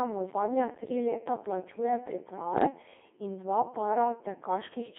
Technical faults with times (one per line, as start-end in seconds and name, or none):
0.00-4.98 Codec 2 vocoder
2.52-2.65 bit errors on digital voice radio